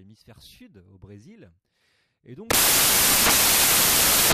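From 2.50 s to the end of the speech clip, the samples are built from the wrong bytes: the reader assembles each value from misordered or misaligned bytes, so the rapidly fluctuating low-order bits land in the most significant positions. The result is a sudden wall of loud, harsh broadband noise replacing the speech.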